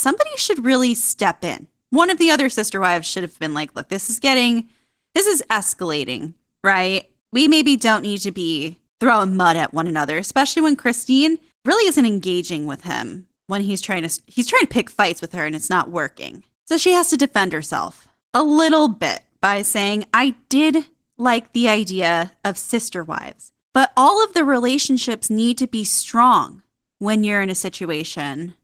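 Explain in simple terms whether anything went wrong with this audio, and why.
The speech has Opus voice compression from start to finish. To save data, the codec rebuilds the voice from a coarse model, so it sounds hoarse and slightly robotic. Unlike simple muffling, the high end is still present. The roughness is in the voice itself.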